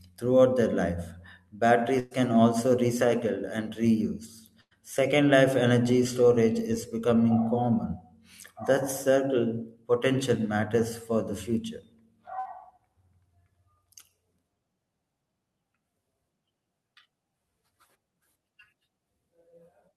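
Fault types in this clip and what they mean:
Burst of packet loss: Several packets in a row went missing, so the receiver stretched the last sound and faded it. This happens three times, near 2.0, 4.6 and 12.4 s, each dropping 60 to 120 ms. The second ends in 60 ms of silence.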